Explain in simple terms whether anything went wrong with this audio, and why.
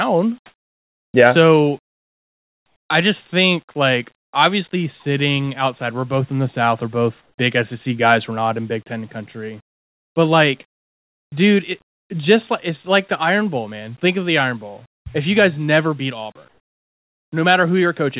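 Yes. During pauses the sending side likely stopped transmitting and the receiver filled each gap with comfort noise in place of the background: a steady, invented hiss instead of the room's real sound. It happens at 0.46–1.14 s, 1.86–2.90 s (just before "I just think like"), 7.22–7.38 s, 10.68–11.32 s (just before "dude it just like") and 16.48–17.32 s (right after "you guys never beat"). Each time, the background turns flat and featureless, mostly quieter, and twice louder.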